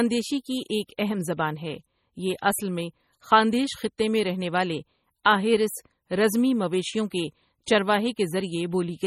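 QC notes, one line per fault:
Throughout, MP3 compression: heavy damage with nothing above 17 kHz, likely from an MP3 encoder starved of bits, which fits a low bitrate near 32 kbps. Weak frequency lines drop in and out between frames, giving a watery, swirling texture and smeared consonant attacks.
5.23–5.25 s and 7.65–7.67 s, pre-echo: a short hiss of about 21 ms runs ahead of a sharp onset, the first right after "میں رہنے والے", the second after "آہیرس رزمی مویشیوں کے". The codec spread noise meant for the loud attack across the quiet moment before it, so the onset sounds softened.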